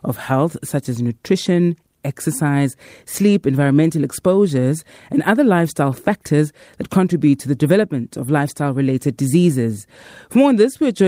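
No technical faults turn up anywhere in this speech recording, so there is nothing to place in time order.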